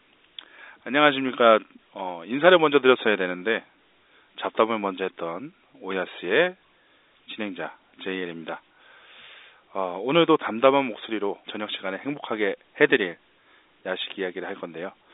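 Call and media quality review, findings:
No faults found in this speech clip. The telephone path sounds as expected for G.711 A-law coding, with the sound confined to the narrow line band and nothing heard above about 3.8 kHz.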